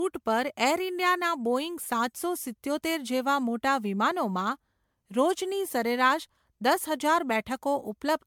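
Throughout the speech there is a swirly, hollow smear, with consonant attacks blurred and nothing above 19.9 kHz, which fits MP3 at around 128 kbit/s. That bitrate alone would sound far cleaner, so the damage is likely generation loss from roughly seven successive re-encodes. Each pass requantised on a shifted frame grid, stacking noise and spectral holes. A single low-bitrate encode would instead show a much lower cut-off with milder swirl.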